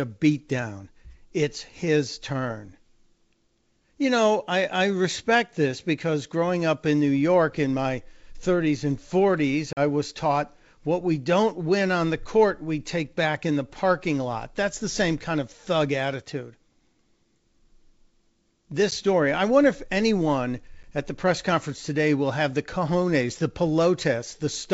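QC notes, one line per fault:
9.73 s, 18.91 s, 20.83 s: packet loss on an ADPCM call. Gaps of 40 ms (several packets, before "was taught what we"), 10 ms (a single packet, before "story i wonder if"), and 10 ms (a single packet, between "i wonder if anyone" and "at the press conference"). Each is a hard-edged silence, shown as a flat waveform and a blank vertical stripe on the spectrogram. The speech then returns slightly distorted because the decoder's predictor and step size have lost track of the sender's. This mismatch clears within some tens of milliseconds.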